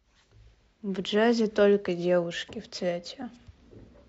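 No technical faults are audible.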